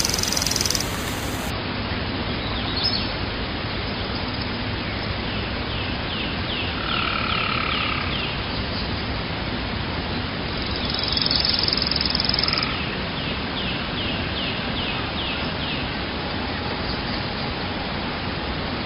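From 0 to 1.5 s a bright, metallic fizz rides on the sound, about 6 dB below it and rising and falling with it. This is imaging from sample-and-hold upsampling. The mirrored copy fills roughly 5.5 to 11 kHz, which points to sound held at about 11 kHz being raised to 48 kHz by simply repeating samples without smoothing.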